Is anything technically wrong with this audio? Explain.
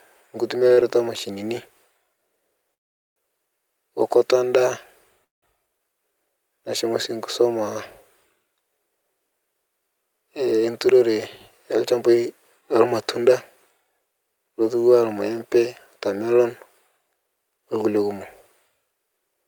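Yes, this speech clip has three kinds of network-timing fault.

Short stalls from late packets occur back to back at 0.67 to 0.73 s and 0.73 to 0.79 s. The jitter buffer ran dry, and the receiver stretched the last sound for 32 ms and then 49 ms until each packet arrived. You hear a sound held too long. Nothing is lost, and unlike a freeze, sound never drops out.

Call audio freezes occur at 2.74 to 3.18 s and 5.24 to 5.44 s. The speech stops dead for about 420 ms and then 180 ms, and nearly the whole wait is silence. It then resumes exactly where it stopped. Packets were likely held up in transit. These gaps are far longer than the stalls, and they go silent rather than holding a buzzing tone.

Jitter buffer speed-ups run from 10.6 to 13.26 s and from 15.3 to 17.86 s. After the backlog, the receiver trimmed pitch-period-sized slices to shed roughly 150 ms and then about 200 ms of delay. 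This makes the speech 6 to 7 percent faster and slightly hurried, with pitch unchanged, which is what distinguishes it from a simple playback-rate error.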